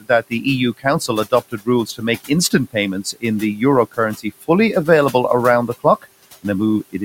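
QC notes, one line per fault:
0.01–0.46 s, 1.25–1.68 s, 1.86–2.03 s, 3.04–3.24 s, 4.17–4.49 s: speech cut by the noise suppressor. The suppressor treated quiet speech as noise and turned it down along with the background, by about 12 to 17 dB at worst. This happens just before "make instant", between it and "the euro", and before "available around the". Unlike a dropout, the sound fades rather than going silent, and the room noise, about 21 dB under the speech, dips with it.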